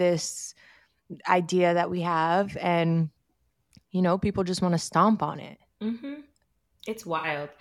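Near the end, from 7.17 to 7.27 s, the speech turns briefly smeared and phasey, a noisy blur instead of clean sound. This is AAC frame loss with concealment: about 64 ms of audio went missing, which fits three lost frames, and the decoder patched the gap from the last good spectrum.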